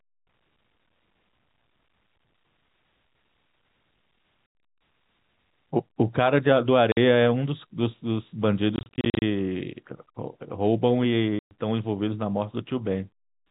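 Packet loss filled with silence cuts hard holes into the speech at 4.49 s, 6.92 s, across 8.76 to 9.22 s, and at 11.39 s. The gaps, in multiples of roughly 10 ms, point to 10 ms packets. Their abrupt edges, with no smoothing or repetition, set this apart from concealed loss.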